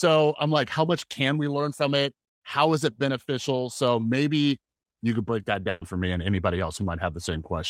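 A burst of packet loss strikes at 5.69 s, right after "you could break that", and lasts until 5.83 s. Several consecutive packets never arrived in time, so the receiver covered the hole by stretching the last good sound for about 120 ms and fading it down, with no true silence. About 120 ms of the original speech is simply gone, and the talker jumps ahead into "for me and anybody".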